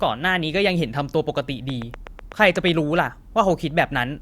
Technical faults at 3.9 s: none

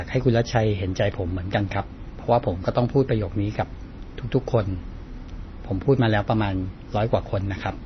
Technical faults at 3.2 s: MP3 compression

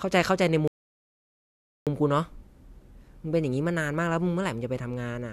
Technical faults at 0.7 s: rebuffering stall

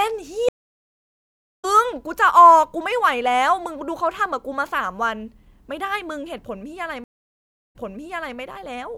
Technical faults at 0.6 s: stream reconnect

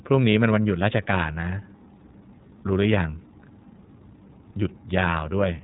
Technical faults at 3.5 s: iLBC codec

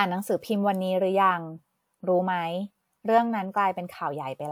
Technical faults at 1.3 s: none

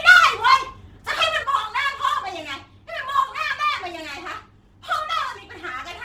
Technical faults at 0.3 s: Opus compression

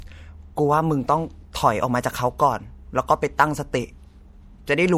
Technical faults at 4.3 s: low-bitrate audio saved at a high bitrate

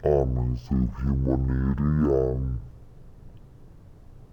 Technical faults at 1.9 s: stereo read as mono

